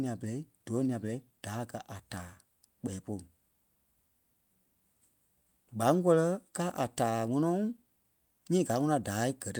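No technical faults audible at any point in the speech recording.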